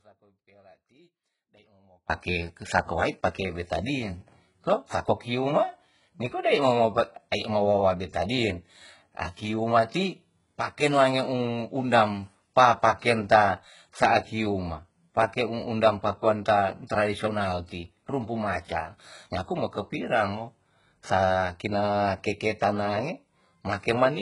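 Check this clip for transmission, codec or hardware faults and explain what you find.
Two problems here, one at the start and one running the whole way through.

From the very start to 2.1 s there's an audio dropout to a faint residue. The speech is already gone when the clip begins, leaving only a faint leak roughly 30 dB down, and it snaps back just before "sa kowait pake betadin". A break in the path is the likely cause.

Throughout, the treble sounds synthetic, with nothing above 11.1 kHz and s sounds going gritty and lispy. That's heavy damage from what is likely HE-AAC compression rebuilding the top end by band replication, which fits a very low bitrate around 12 kbps.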